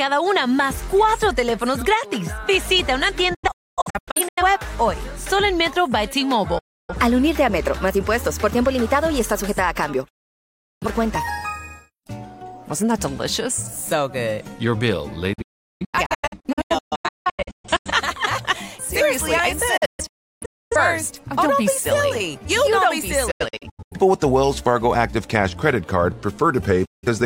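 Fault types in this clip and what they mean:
Digital broadcast dropout: the receiver lost the signal or rejected frames that failed their checksum, muting until good frames returned. The sound fades out within 8 ms and goes silent seven times. Several dropouts are clusters of short holes, the longest cluster spanning about 2.5 s from 15.33 s.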